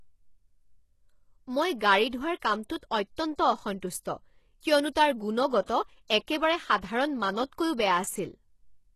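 Throughout the speech, the treble sounds synthetic: s sounds turn gritty and metallic, and nothing survives above 12.3 kHz. This is likely HE-AAC compression at a low bitrate around 16 kbps, rebuilding upper bands from copied lower ones. A spectrogram shows smeared, repeated-looking high bands ending in a hard ceiling.

At 4.92 to 4.96 s, just before "তাৰ গুণগত", a pre-echo appears. A hiss lasting about 36 ms runs ahead of the onset, because quantisation noise spread across the coding block fills the quiet gap. On the waveform, low-level fuzz precedes the attack, which is softened.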